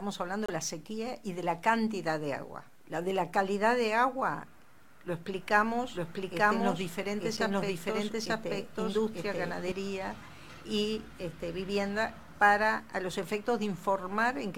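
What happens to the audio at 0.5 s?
A short blip of misplaced noise cuts in from 0.46 to 0.50 s, peaking around -25 dBFS. It's a corrupt frame decoded: roughly one compressed frame arrived with damaged bits, and the decoder played it anyway, spraying energy into the wrong frequencies for that frame's length.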